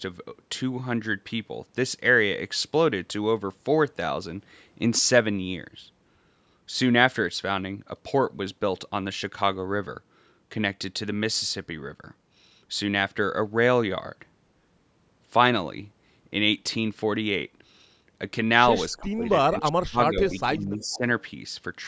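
From 18.97 to 19.25 s the speech dips by about 15 dB for roughly a fifth of a second. It happens again from 19.42 to 21.03 s, with drops of up to about 25 dB adding up to around a second. This is speech suppressed in double talk, likely the echo canceller turning down the near talker while both sides speak at once.

Within those stretches, faint delayed copies of the speech appear at 19.03 to 19.08 s, 20.29 to 20.39 s and 20.82 to 20.98 s. They trail the original by 330 ms and sit about 20 to 25 dB below it. This is echo leak, likely loudspeaker pickup that the canceller failed to remove and sent back.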